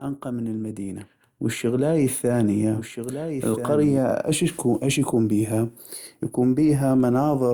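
A second, slower capture path or a misaligned edit is likely holding a duplicate of the speech, producing a doubled audio track from the very start until 3.98 s. A quieter copy, around 10 dB down, trails roughly a second and a half behind, with no decay or room colour, and cuts off abruptly at 3.98 s.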